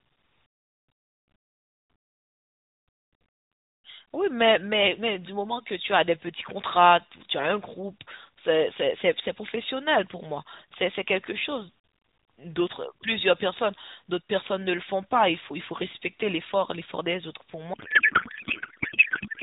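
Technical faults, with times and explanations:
17.74 to 19.43 s, codec payload misread: the last stretch of speech turns into garbled noise and warble that barely tracks it. The AMR frames sound as if octet-aligned packing was unpacked as bandwidth-efficient, so every field lands shifted and decodes into nonsense.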